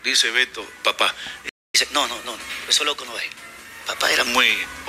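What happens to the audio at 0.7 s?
Nothing goes wrong at 0.7 s; the audio carries on intact through that moment.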